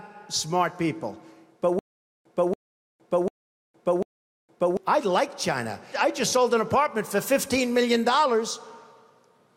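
From 1.79 to 4.77 s, a 282 ms burst of sound repeats four times, each followed by about 463 ms of dead digital silence, every 745 ms. This stutter with silent gaps is likely a stalled stream replaying its last fragment before running empty.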